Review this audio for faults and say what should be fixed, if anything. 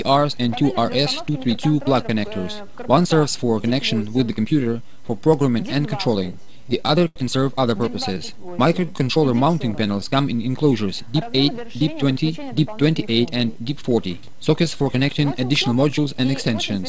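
Repeated stalls (stutter) from 6.24 to 7.18 s: packets arrived late, so the jitter buffer kept running dry, about eleven times. Each time the receiver stretched the last sound to fill the wait, 180 ms in all, the longest gap 81 ms. Nothing is lost, but the audio halts and drags. A larger or faster-adapting jitter buffer on the receiving side would stop it draining on late packets.

Jitter buffer slow-down from 8.18 to 9.06 s: to rebuild its reserve, the receiver repeated single pitch periods in a row. That added 114 ms and made the audio play at 88% speed at unchanged pitch, with drawn-out sounds. Steadier packet delivery, or a buffer target that changes less abruptly, would remove the need for this stretching.

Jitter buffer speed-up from 11.07 to 12.31 s: with too much audio queued, the receiver cut out short pitch-period pieces repeatedly, around a tenth of a second in total, so the audio runs at 109% speed at the same pitch and sounds hurried. 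Smoothing out network delay so packets don't arrive in bursts would keep the buffer from overfilling.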